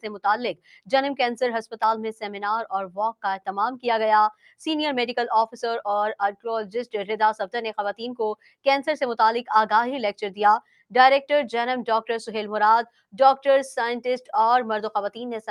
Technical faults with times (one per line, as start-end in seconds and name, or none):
0.00-15.51 noise suppressor applied to music or sounds
0.54-0.91 sound cut by the noise suppressor
4.33-4.53 sound cut by the noise suppressor
8.36-8.66 sound cut by the noise suppressor
10.61-10.93 sound cut by the noise suppressor